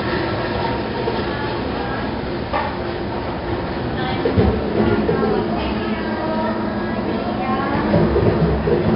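From start to finish the audio carries 4-bit ADPCM compression, heavy here. Each sample is coded as a coarse 4-bit step from a predicted value, so a gritty hiss rides on every loud passage and sharp attacks smear into distortion where the step size lags. Nothing sounds above 5.3 kHz, pointing to a low sample rate near 11 kHz and a data rate that fits about 44 kbps. On a spectrogram, noise fills the band beneath loud events and stops at a hard ceiling near 5.3 kHz.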